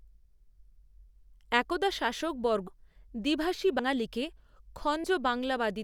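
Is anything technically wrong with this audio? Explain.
Yes. Compressed frames are skipped at 2.67 s (right after "একদা শাসকবর্গ"), 3.79 s and 5.04 s. The speech jumps ahead by a handful of 32 ms frames, roughly 150, 100 and 70 ms of audio. Each join is an abrupt jump forward with no silent gap, unlike a dropout.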